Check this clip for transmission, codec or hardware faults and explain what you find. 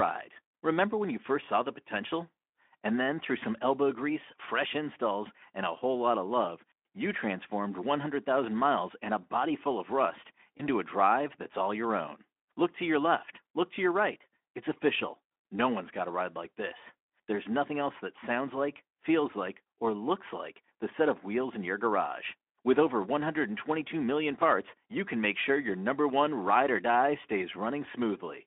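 One transmission fault stands out, heard through a narrowband Speex speech path with only light coding damage.

VoIP packet loss concealed by the speech codec, 10.57 to 10.67 s, between "body full of rust" and "a drive that's all": the gap fits a single lost 20 ms frame. The decoder rebuilt it from the previous pitch and filter at falling gain, so the speech briefly smears into a buzzy tone or a coloured noise that fades, and stays weak for a moment after the stream resumes.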